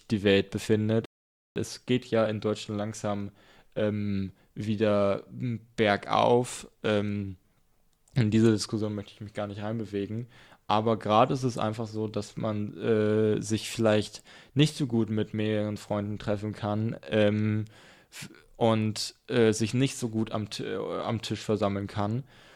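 At 1.05 s the speech drops into silence until 1.56 s, then picks up exactly where it left off. That's a rebuffering stall: the player ran dry of downloaded audio and waited for more, so nothing's missing, just about half a second of dead air added.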